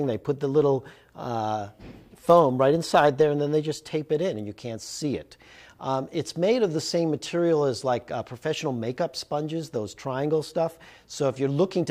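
No technical faults are audible.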